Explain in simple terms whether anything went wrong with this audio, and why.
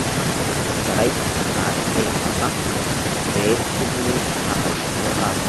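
Echo with no canceller: the far end played this call through a loudspeaker, its microphone caught it, and nothing removed it. So from start to finish, every bit of speech returns roughly 0.4 seconds later as a quieter, thinner copy.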